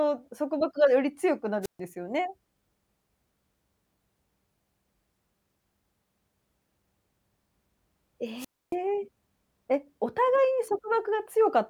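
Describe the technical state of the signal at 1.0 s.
At 1.0 s the speech signal is intact, with no technical fault to be heard at that moment.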